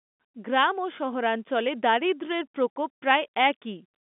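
No technical faults can be heard in this speech. The G.711 telephone coding is audible as the narrow line band it imposes, with the speech held between about 200 Hz and 3.6 kHz and nothing reaching above 3.8 kHz.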